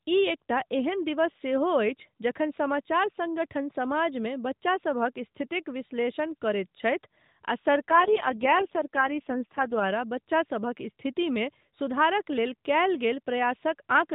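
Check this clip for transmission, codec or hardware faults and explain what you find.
There's one fault here: an AMR rate drop from 7.90 to 9.85 s, ending just before "बच्चासभक स्थितिमे". The speech turns rougher and more synthetic, which fits the mobile link switching from about 12.2 down to 4.75 kbps to spend bits on error protection. The narrowband phone bandwidth stays the same throughout, with no gap.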